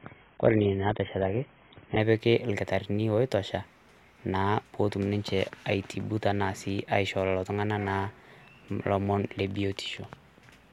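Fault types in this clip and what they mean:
Adaptive stream starting at a low bitrate: from 0.0 to 2.0 s the speech is dull, with nothing above 3.8 kHz and strong coding artefacts, fitting a low-bitrate start around 16 kbit/s, before it jumps cleanly to 96 kbit/s quality.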